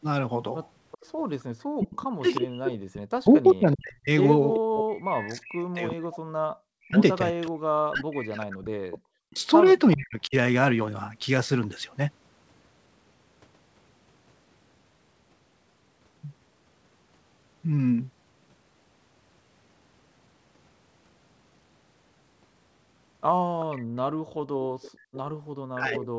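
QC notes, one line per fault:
0.92–2.38 s, 4.54–7.51 s, 9.92–9.97 s, 23.61–25.21 s: echo leak. A faint copy of the speech trails the original by 390 ms, roughly 15 dB down in the first two stretches, about 20 dB down in the brief 9.92 s scrap and about 25 dB down near the end. The likely cause is a far-end echo canceller letting loudspeaker pickup through. On a spectrogram, the harmonic pattern repeats as a dimmer ghost shifted 390 ms to the right. In the waveform, low-level envelope bumps sit in gaps where the main speech has paused.
1.77–10.35 s and 25.7–26.12 s: speech suppressed in double talk. The talker's level dips, thins and drops out in pieces, for about 7 s in total across the first span and about 0.4 s at the end. The deepest cuts are around 40 dB and around 35 dB. This is likely the echo canceller failing to separate the talker from the overlapping far-end echo and attenuating both. 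On a spectrogram, the speech energy fades or vanishes in blocks, with the upper harmonics going first. The waveform envelope collapses abruptly mid-phrase.
23.85 s to end: background gated by the echo canceller. While the loudspeaker signal is active, the room tone beneath the speech is pulled down by as much as about 35 dB. It sounds like the ambience shutting off instead of fading naturally, because the canceller clamps the microphone hard during far-end activity. On a spectrogram, the broadband noise floor drops to near-black in steps. In the waveform, the low-level hiss between louder parts flattens almost to silence.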